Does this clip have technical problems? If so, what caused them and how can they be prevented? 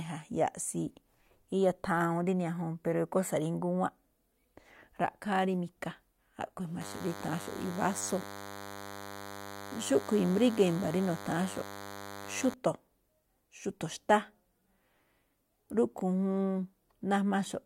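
Yes. From 6.81 to 12.54 s a thin DECT cordless phone buzz sits roughly 15 dB under the speech, caused by a nearby DECT handset or base radio bursting every 10 ms. Its rasping harmonics separate it from smoother mains hum. Keep DECT equipment well away from microphones and cables.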